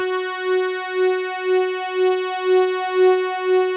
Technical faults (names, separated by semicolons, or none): noise suppressor applied to music or sounds